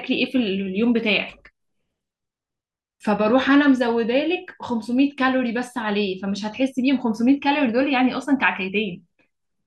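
No technical faults can be heard anywhere in this speech recording. Nothing in the audio departs from what a normal capture and playback would give.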